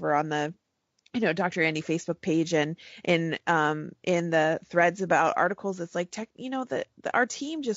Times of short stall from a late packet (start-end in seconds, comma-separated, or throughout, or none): none